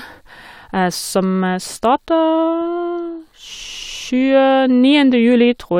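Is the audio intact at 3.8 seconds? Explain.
Yes, at 3.8 seconds the speech plays through intact, with no dropout, glitch or other technical fault.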